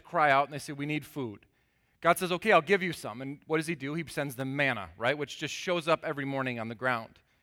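At 4.40 s, just before "manna right", a sharp snap sits on top of the speech. This is an electrical switching spike. It lasts about 16 milliseconds and peaks at roughly -30 dBFS. The likely cause is a nearby switch, motor or static discharge throwing off a brief arc, which the audio line picked up as interference. The snap is added over the speech rather than replacing it.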